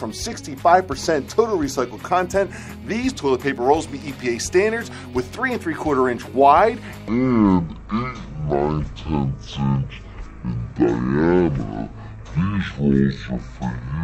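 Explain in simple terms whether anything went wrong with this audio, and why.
From 7.08 s to the end, a section at the wrong speed plays at about half speed (0.52 times), so the sound turns slow and drops by nearly an octave. It likely came from being played against the wrong clock. Unlike a simple pitch change, tempo and pitch fall together.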